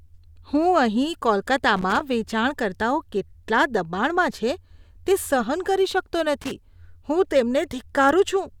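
At 1.76 s a burst of loose connector crackle cuts into the speech, lasting a quarter second to 2.01 s. A worn or dirty contact is making and breaking, chopping the signal into irregular scratchy crackle. It returns briefly from 6.42 to 6.51 s.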